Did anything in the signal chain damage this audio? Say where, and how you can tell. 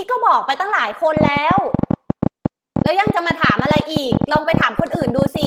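Yes. At the codec stage, the whole speech clip sounds hoarse and grainy, which points to Opus compression at a low rate near 16 kbps, likely in hybrid mode.

From 1.17 s to 5.46 s, a train of clicks ticks unevenly, about 12 per second, roughly fifty pulses, peaking about 15 dB above the speech. This is likely interference or a faulty connection.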